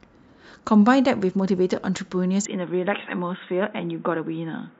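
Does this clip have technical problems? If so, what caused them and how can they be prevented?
Yes. From 2.45 s to the end, the speech abruptly turns dull and boxy, with nothing above 3.8 kHz and a faint new background noise sitting well below it, while the level stays about the same and no gap marks the change. This is likely the input switched to a poorer device, such as a second microphone or a headset's call profile, whose narrower band and different noise floor replace the original microphone's. Locking the recording input to one chosen device, and disabling automatic switching to headsets, prevents this.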